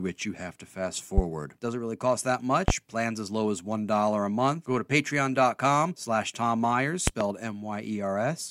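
Three loud pops: one at 1.18 to 1.21 s right after "you have to fast", another at 2.68 to 2.72 s after "really cost that", then a double pop from 7.07 to 7.24 s. They peak about 15, 20 and 25 dB above the speech, which keeps going underneath. Each is likely a voltage spike from a plug, switch, static or driver glitch.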